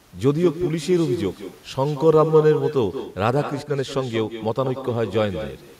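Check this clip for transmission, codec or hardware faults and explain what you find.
One fault is present across the whole speech clip: echo with no canceller. The far end is playing the call through a loudspeaker, and its microphone is picking that up. With no echo cancellation to remove it, the talker's own speech returns after the network round trip, roughly a fifth of a second late and about 10 dB quieter. Every phrase is trailed by a thinner copy.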